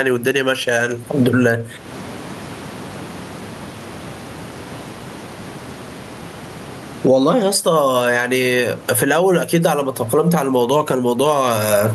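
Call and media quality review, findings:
Gain pumping throughout the speech: room noise, about 34 dB below speech, with a gain swing of around 20 dB. Likely input gain set far too high with a fast limiter clamping peaks. The speech sounds squashed and flattened in level.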